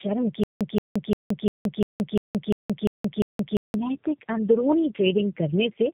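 From the start the whole thing carries tandem speech coding: three G.729A passes chained through G.711, so it's rough, muffled, warbly, and nothing above 3.8 kHz survives. Then from 0.44 to 3.75 s there's stutter with silent gaps. A 176 ms fragment repeats nine times, each followed by about 172 ms of dead silence. That's likely a stalled stream replaying its last chunk on each retry.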